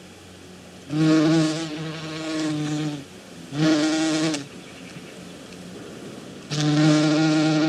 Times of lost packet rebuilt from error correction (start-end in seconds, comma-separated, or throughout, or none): none